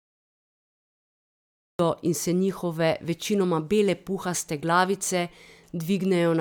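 From 0 to 1.79 s there is only digital silence, then speech begins abruptly mid-sound: a cut-off start, where capture began late, leaving no natural attack.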